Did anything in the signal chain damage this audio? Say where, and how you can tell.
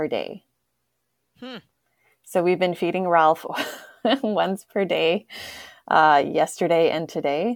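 No, nothing in this speech recording stood out as damaged on listening.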